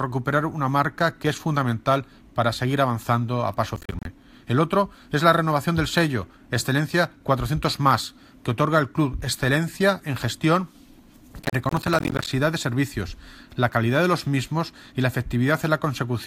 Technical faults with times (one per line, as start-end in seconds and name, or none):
3.76-4.05 processor overload crackle
11.42-12.27 processor overload crackle